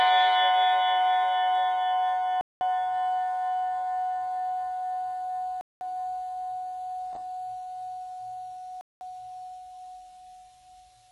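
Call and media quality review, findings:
Music clip, metallic, gritty treble throughout with nothing above 11.5 kHz: likely HE-AAC compression, heavy damage at a rate near 12 kbps. Upper band is rebuilt from copied lower bands, so harmonics misalign, unlike a plain low-pass, which is dull rather than grainy.

Gap between chunks, 200 ms silences at 2.41 to 2.61 s, 5.61 to 5.81 s and 8.81 to 9.01 s. Silence falls at each 3 s chunk join. Strict 3.2 s regularity with no audio missing distinguishes it from random packet-loss dropouts.

Chunks out of order at 7.13 to 7.16 s: brief jumbled moment, no silence. A roughly 10.7 ms chunk was written two chunks late, creating three hard joins. Material is reordered, not removed, unlike a gap.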